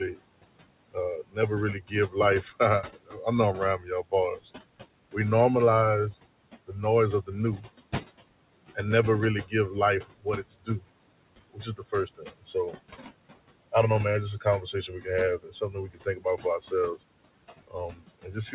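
A speech recording over a call path that stops at 4 kHz, which fits a narrowband telephone codec. Noise suppressor artifacts run throughout: the room noise, about 16 dB under the speech, is pulled down by about 21 dB in the gaps and returns beneath the talking, so the background pumps in step with the speech rather than holding steady as plain room noise would. Speech cut by the noise suppressor occurs at 0.94–4.48 s, 7.26–7.68 s after "noise of", 9.44–10.84 s after "and never really", 11.53–12.75 s, 14.41–17.0 s and 17.67 s to the end. Within those spans, parts of the speech, adding up to roughly a second in the first and under a second in each later one, drop by about 17 to 22 dB. Unlike a dropout, these parts sound swallowed rather than silent.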